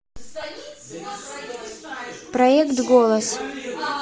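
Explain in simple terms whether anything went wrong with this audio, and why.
Yes, two things went wrong. First, the speech was likely squeezed through Bluetooth LC3 compression, the codec used by Bluetooth LE Audio, which works on 10 ms slices of sound. To save data, it throws away much of the high-frequency detail and fills that gap with noise. Throughout the clip, this gives the voice a breathy, grainy edge.

Second, there are lost LE Audio frames at about 0.42 s. A piece of the wireless stream never arrived, and the dropout's length, about 10 ms, fits a single missing frame. The decoder covered the hole by reusing the previous slice's sound with its detail scrambled, so you hear a brief noisy smear instead of a clean click or silence.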